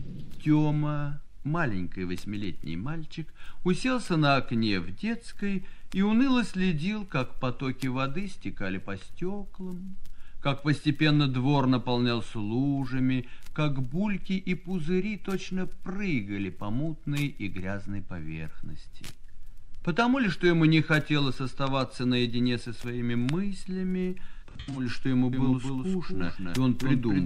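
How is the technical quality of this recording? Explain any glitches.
Two glitches near the end are worth flagging.

From 24.33 to 24.87 s there's AAC frame loss with concealment. About a quarter second of audio drops out in bursts spread over roughly 430 ms, the longest gap around a tenth of a second. The decoder patches each hole from the last good spectrum, so you hear a smeared, noisy, phasey stretch rather than clean silence.

From 25.33 s to the end there's a doubled audio track. A second full-band copy trails the original by around 300 ms at about 5 dB quieter, and it kicks in abruptly with no reverb tail or room colour. It's likely the same signal being captured again through a slower path.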